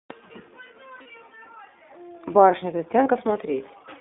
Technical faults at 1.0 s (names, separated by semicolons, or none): iLBC codec; lost iLBC frames